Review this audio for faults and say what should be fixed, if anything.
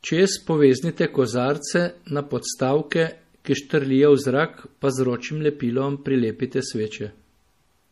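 Throughout the speech there is no content above about 14.9 kHz, and the top end has the smeared, swirling texture typical of heavy MP3 coding, even though the file is a high-bitrate MP3. This is likely low-bitrate audio saved at a high bitrate: a low-bitrate MP3 source, perhaps around 40 kbit/s, was re-encoded at a generous rate, which cannot restore the discarded detail. To prevent it, encode from the original uncompressed recording rather than from a compressed copy.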